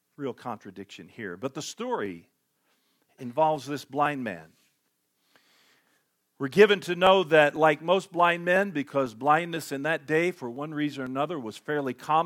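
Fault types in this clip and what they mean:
Periodic USB or driver dropouts, 0.07 to 12.06 s: something on the system stalls the USB bus or audio driver every 0.5 s, and each time roughly half a millisecond of the speech is skipped outright rather than filled with silence, so the waveform jumps forward and leaves a small discontinuity. The result is a steady tick or pop twice a second, audible whenever speech is present.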